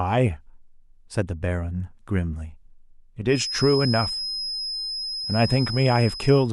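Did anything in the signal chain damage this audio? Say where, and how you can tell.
Yes. A feedback whistle at 5.1 kHz, about 10 dB under the speech, runs from 3.26 s to the end. The likely cause is a loudspeaker-to-microphone loop held just below runaway gain.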